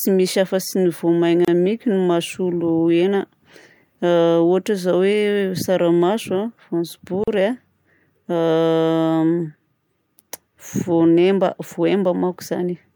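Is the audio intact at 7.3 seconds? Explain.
No. At 7.24 s the speech drops out for about 39 ms, ending at 7.28 s. This is a gap at a join of encoded pieces. The audio was encoded in separate segments and spliced without trimming. The encoder's start-up delay and the padding on the last frame both remained at the seam. So a short silence cuts into continuous speech. Its edges are smeared by the codec. The speech then resumes where it broke off.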